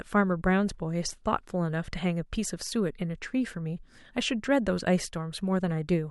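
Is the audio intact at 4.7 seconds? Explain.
Yes, at 4.7 seconds the speech plays through cleanly, with no dropout, click, distortion or other fault at that moment.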